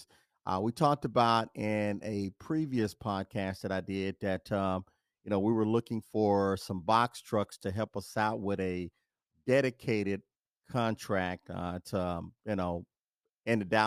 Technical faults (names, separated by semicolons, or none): none